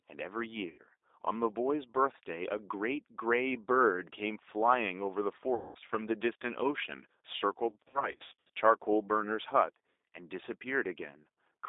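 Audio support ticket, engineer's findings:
G.729 codec, throughout. Speech squeezed into a narrow line band, about 300 Hz to 3.7 kHz, nothing above. Plainly audible roughness, synthetic edge from low-rate filter-plus-pulse rebuild of each 10 ms frame. Consistent with G.729A at 8 kbit/s. Component: VoIP call path encoder/decoder.

VoIP packet loss concealed by the speech codec, three events. 0.70–0.81 s: about 80 ms gone, short stretched smear. 5.55–5.79 s: about 200 ms gone, stretched sound fading out, weak recovery after. 7.70–8.50 s: 360 ms lost, scattered over 800 ms, runs up to 60 ms; repeated stretched dropouts. Decoder extrapolating last pitch and filter with falling gain. Component: network/jitter buffer.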